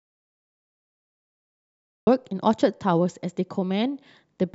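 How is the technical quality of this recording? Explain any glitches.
The recording has one clear glitch, an audio dropout to silence. From the very start until 2.07 s there is silence with no room tone, then the speech cuts in mid-flow. The likely cause is a lost input, with the recorder writing silence until the signal returned.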